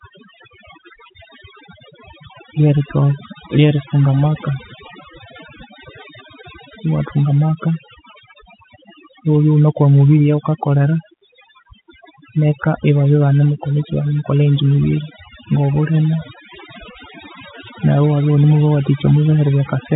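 Speech, and the trouble running through the whole thing is overdone noise removal. The gaps between phrases drop to near silence with little twinkling specks in them. That's a noise reducer cranked too hard: any frequency band sitting close to its noise estimate gets pushed right down, so the softer parts of the voice get scooped out along with the noise. Underneath, the G.711 telephone coding is doing its normal job, with nothing above about 3.8 kHz getting through.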